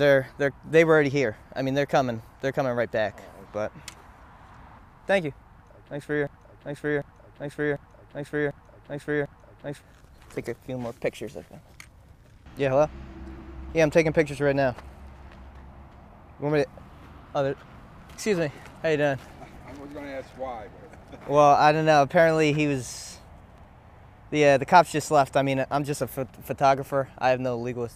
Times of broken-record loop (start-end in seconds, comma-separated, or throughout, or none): 6.27-9.82